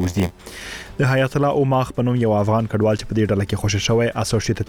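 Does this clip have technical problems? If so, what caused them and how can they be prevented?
Yes. Block size mismatch (padded), 0 to 0.85 s: short zero-filled gaps in each block, consistent with 512-sample reads, buzz at 86.1 Hz and slow playback at 0.938 times speed with pitch about normal. Prevent it by matching block sizes between processing stages, or buffering to accumulate full blocks before reading.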